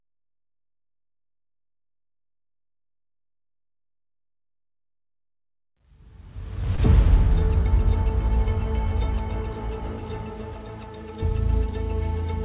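At 6.76 to 6.80 s there is a short concealed packet loss. About 20 ms of audio arrived too late to decode. The receiver extended the preceding sound to cover the gap and then blended back. It is heard as a brief smear or wobble. The band stops at 4 kHz, which fits a narrowband call codec.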